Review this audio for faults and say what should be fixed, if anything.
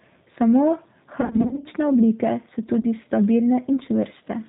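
Throughout the speech, the sound has the rough, slightly synthetic quality of the G.729 codec, with nothing above 4 kHz and plainly audible coding damage. This fits 8 kbit/s G.729A, which rebuilds each 10 ms frame from a vocal tract filter, a pitch predictor and a few pulses instead of the real waveform. A simple 4 kHz low-pass would sound muffled but natural. This sounds grainy and slightly synthetic. Prevention: negotiate a wideband or higher-rate codec such as G.722 or Opus where the link allows.

VoIP packet loss concealed by the speech codec occurs between 1.21 and 1.67 s. About 250 ms of audio is missing, scattered across roughly 440 ms, with the longest single gap about 50 ms. A shorter event occurs from 2.80 to 2.85 s, lasting about 30 ms. Instead of silence, the decoder stretches its last pitch and filter into a fading buzzy tone or coloured noise, and the voice stays weak for a while after packets resume. 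That buzz and slow recovery distinguish it from clean dropouts or clicks. Prevention: reduce network loss with QoS and a properly sized jitter buffer, or add forward error correction.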